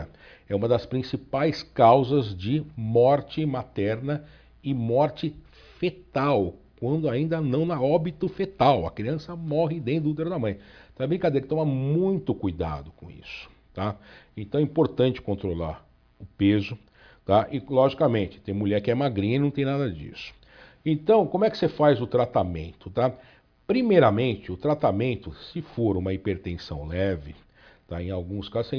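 No technical fault is audible at any point in the clip.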